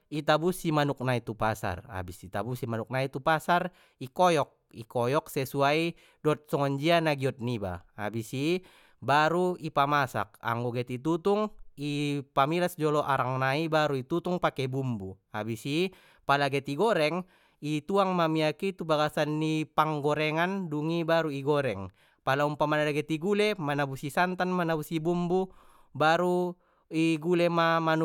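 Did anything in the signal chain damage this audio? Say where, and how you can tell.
No, nothing in the signal chain stood out as damaging this speech recording when I listened to it.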